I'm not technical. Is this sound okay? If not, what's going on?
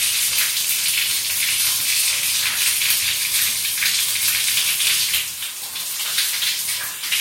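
Yes, this one's fine, with nothing in it that sounds broken or out of place, so there's nothing to worry about here.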